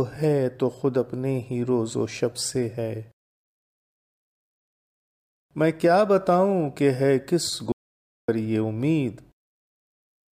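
The input signal was likely lost for a moment, so the recorder kept writing silence. This audio dropout to silence runs from 7.72 to 8.28 s, a complete 0.56 s gap with no room tone.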